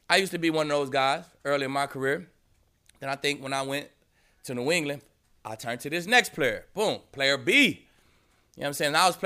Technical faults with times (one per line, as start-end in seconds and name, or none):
none